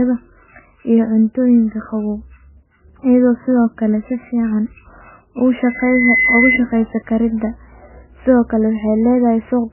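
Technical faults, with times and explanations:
Throughout, MP3 compression: heavy bit starvation, likely near 9 kbps, removes everything above 3 kHz and flickers weak frequency lines, leaving the speech dull, watery and smeared.
5.61 to 6.60 s, loudspeaker feedback squeal: the microphone-loudspeaker loop exceeds unity gain at 2 kHz, so a pure tone swells over roughly half a second to about 5 dB above the speech.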